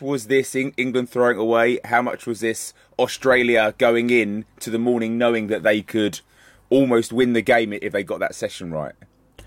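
No technical faults can be heard anywhere in the speech recording; the signal stays continuous and steady at every point.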